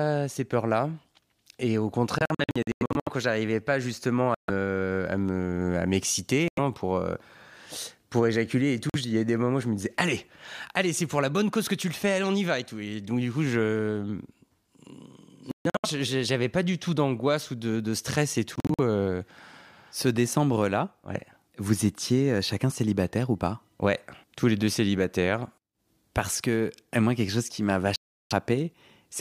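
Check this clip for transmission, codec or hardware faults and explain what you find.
The speech has seven Bluetooth dropouts at 2.18 to 3.09 s (just before "quand j'arrivais pas justement"), 4.34 to 4.50 s, 6.48 to 6.59 s, 8.90 to 8.96 s, 15.51 to 15.86 s, 18.56 to 18.80 s (after "ou de stress et") and 27.96 to 28.33 s (after "quelque chose qui m'a"). Audio packets likely arrived too late over the wireless link and were discarded. Each loss cuts the sound to silence, and the speech resumes further on as though it had kept playing. The first, fifth and sixth dropouts are broken into several short gaps.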